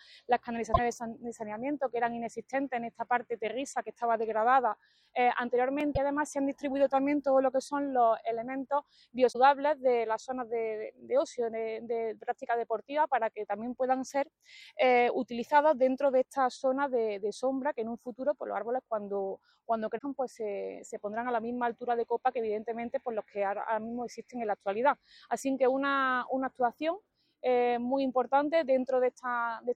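At 0.72–0.79 s, 5.94–5.97 s, 9.31–9.36 s and 19.97–20.01 s the audio skips forward with a brief chirp or noise burst. This is likely a broken MP3 bit reservoir: after missing frames, each fitting roughly 26 ms, the decoder reads borrowed bits from the wrong frame.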